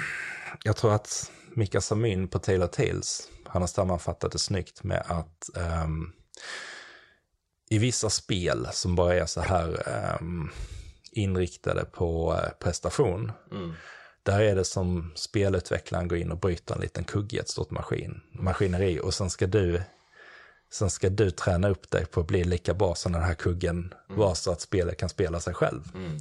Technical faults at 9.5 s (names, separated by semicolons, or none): corrupt frame decoded